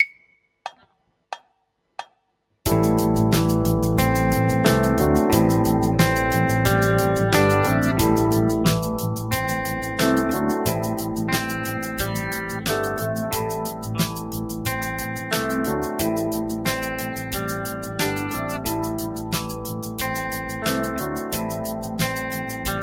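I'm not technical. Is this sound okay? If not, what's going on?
No. A noise suppressor applied to music or sounds is active through the whole clip. This is a cleanup tool built for speech, and it treats steady, held sound and lingering echoes as background noise to be removed. Sharp starts of sounds pass through, but anything sustained gets pushed down, so the level keeps rising and falling noticeably, giving a pumping, fluttering, thin feel.

There is also sound cut by the noise suppressor at 14.13–14.66, 17.06–17.32, 17.75–17.99, 19.1–19.98, 21.75–21.99 and 22.41–22.65 seconds. In these moments the tool judged what was playing to be noise and turned it down further than the rest. The longest dip, near 19 to 20 seconds, lasts under a second. Fading and held parts sink or end early, while sudden sounds mostly survive.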